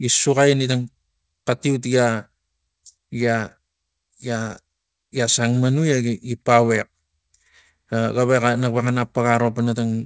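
This is speech carried over a call link. It has one short concealed packet loss, between 4.48 and 4.52 s. About 20 ms of audio never reached the decoder in time. The receiver covered the hole by extending the sound just before it, then blended back into the real signal. The result is a brief smear or wobble at that point. The call path also leaves nothing above 8 kHz, which fits a wideband codec such as G.722.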